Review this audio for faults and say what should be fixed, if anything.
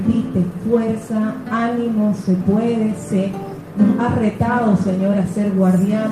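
Nothing needs fixing here, as the signal holds steady and intact across the whole recording with no technical faults to report.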